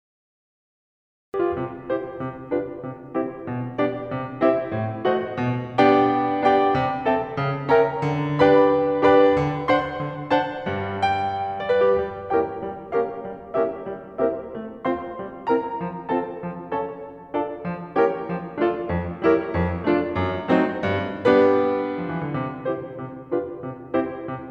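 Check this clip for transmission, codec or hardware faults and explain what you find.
One fault is present: a cut-off start. For the first 1.34 s there is digital silence, and at 1.34 s the music begins abruptly mid-sound because capture started late, skipping the natural attack. The waveform shows a flat line jumping straight to full amplitude; the spectrogram shows a hard vertical edge.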